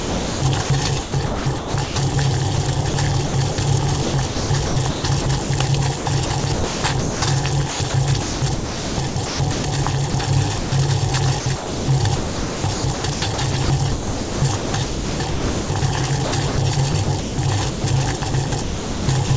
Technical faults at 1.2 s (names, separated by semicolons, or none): sound chopped by the voice detector